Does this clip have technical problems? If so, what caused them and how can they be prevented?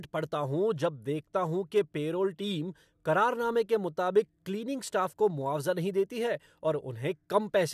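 No, the speech signal runs without any audible technical fault, so there is no cause to trace and nothing to prevent.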